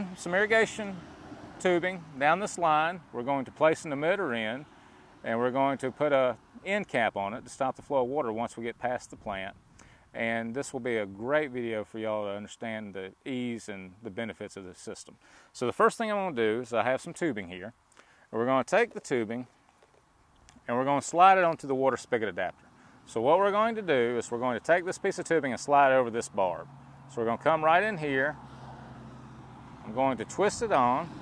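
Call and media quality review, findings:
Nothing stood out on listening, and no findings are raised for this clip.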